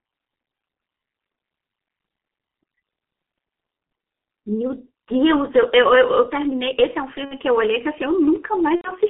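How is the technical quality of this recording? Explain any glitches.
Quality is poor: the whole recording carries heavy low-bitrate codec damage, and two short dropouts near the end are patched over by the decoder.

G.723.1 codec, throughout: the speech is confined to roughly 200 Hz to 3.4 kHz and sounds muffled, hoarse and smeared at consonants, consistent with a 6.3 kbit/s rate. Its 30 ms frames and slowly updated vocal model blur transitions. A spectrogram shows a hard ceiling near 3.4 kHz and a smeared, blocky texture.

VoIP packet loss concealed by the speech codec, at 7.25–7.34 s and 8.76–8.92 s: when packets go missing, the decoder extends its last pitch and filter while lowering the gain. The first gap is about 60 ms and the second about 90 ms, which fits two and three lost 30 ms frames. Each is stretched into a buzzy tone or coloured noise that fades, with weak, distorted speech just after. 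A waveform shows a repetitive, decaying envelope, and a spectrogram shows a frozen spectrum that blurs before the speech recovers.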